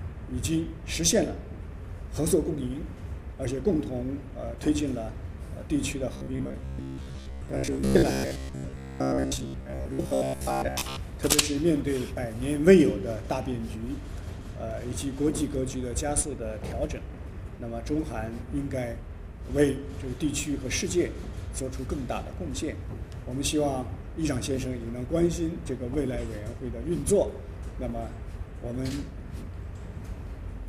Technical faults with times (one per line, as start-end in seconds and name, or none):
6.14-11.02 robotic sound from repeated short buffers